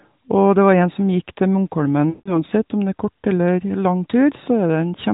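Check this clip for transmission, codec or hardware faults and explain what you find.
One transmission fault: a burst of lost AMR speech frames from 2.10 to 2.35 s, heard over the narrowband AMR codec's 4 kHz band limit and light coding roughness. About 160 ms of speech is missing, a span that matches eight consecutive 20 ms frames failing their checksum after radio errors. The decoder fills the gap by repeating the last good pitch and vocal tract parameters at decreasing gain, so the sound smears into a drawn-out tail that fades toward silence before speech resumes weak or rough.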